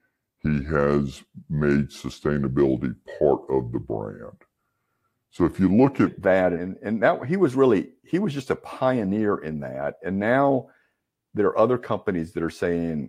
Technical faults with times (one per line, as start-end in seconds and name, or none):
0.00-6.06 section at the wrong speed